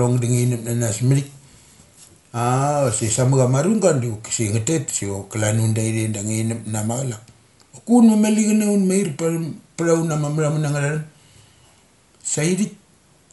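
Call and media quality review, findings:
Dull, band-limited speech throughout, nothing above 11.5 kHz, rough fluttering noise around voiced tones. Likely Dolby Digital compression, fitting a 64 kbps encode: noise-filled, not swirly like MP3.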